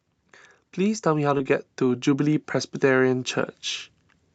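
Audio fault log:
0.19–3.34 s, automatic gain rising: the level climbs steadily by about 5 dB over roughly three seconds, and the background noise rises along with the speech. That shared, gradual swell marks a gain controller raising its gain after judging the input too quiet. It is not a speaker moving closer or talking louder, because then the speech would grow while the room noise stayed put. A compressor would act on individual syllables rather than as one slow ramp.
1.37–1.41 s, short concealed packet loss: about 20 ms of audio failed to arrive in time, and the receiver covered the gap by carrying the preceding sound forward before blending back into the real signal. The result is a brief smear or wobble with no silent hole, which sets it apart from an uncovered dropout that would leave a hard gap or click. The fill carries on from the sound just before it, so it does not sound like a stutter or a repeated chunk. 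The high end stops around 8 kHz from the call codec's bandwidth.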